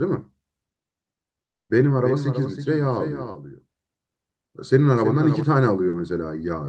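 From 1.45 to 1.71 s the speech breaks off for about a quarter of a second in what sounds like a long network dropout: the last sound smears briefly into a fading buzz, then silence, and speech resumes further on with that stretch missing, most likely because no packets arrived.

Between 2.03 and 5.43 s a doubled audio track runs underneath, a clean full-band copy of the speech trailing roughly a third of a second behind and about 10 dB quieter. It has no reverberant tail and appears and disappears abruptly, likely from a second, slower capture path mixed in.

At 3.31 to 3.37 s and again at 5.89 to 5.95 s there is short concealed packet loss. About 40 ms of audio never reached the decoder, and the gap was patched by extending the preceding sound before blending back, which is heard as a brief smear or wobble.

The Opus call path caps the audio at 12 kHz.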